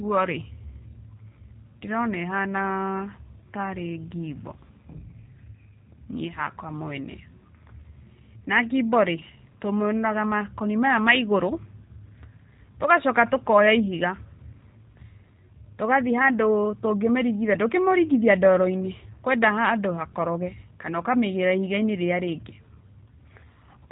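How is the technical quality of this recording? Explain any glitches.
The speech sounds slightly rough and synthetic from start to finish, with a narrow, boxy tone and nothing audible above about 3.8 kHz. That is G.729 codec damage, plainly audible across the whole recording. The codec discards the actual waveform and rebuilds speech from a vocal tract filter, a pitch predictor and a handful of pulses per short frame, which fits a rate of around 8 kbit/s. The sparse pulses cause the buzzy, artificial texture, and the coarse frequency limit removes the upper sibilance.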